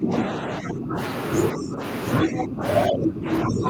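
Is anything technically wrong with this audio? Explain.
Yes. Speech suppressed in double talk occurs at 0.00 to 0.97 s, 1.53 to 1.82 s, 2.22 to 2.64 s and 2.88 s to the end. The echo canceller likely mistook overlapping talk for echo, pulling the speech down by roughly 10 to 15 dB.

Other side's voice leaking through occurs at 2.38 to 2.44 s. This is likely residual loudspeaker echo left by the canceller, heard as a brief scrap about 10 dB below the talker.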